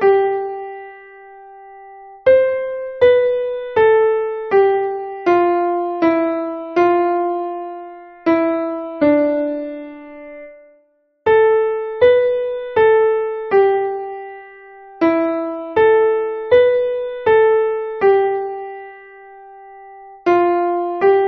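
No technical faults can be heard anywhere in the signal.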